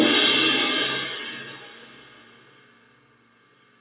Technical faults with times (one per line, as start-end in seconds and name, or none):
0.00-3.81 noise suppressor applied to music or sounds